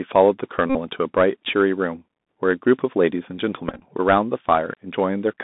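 Throughout, the Bluetooth CVSD headset codec confines the speech to about 200 Hz to 3.7 kHz, leaving empty spectrogram bands above, with scratchy sibilants and a granular hiss floor. At 0.70 to 0.76 s, a Bluetooth headset packet repeat replaces about 52.5 ms with recycled audio, giving a buzz near 267 Hz. The waveform shows evenly repeating cycles. At 3.69 to 3.82 s, scattered repeats total 75 ms, each stretch up to roughly 15 ms long.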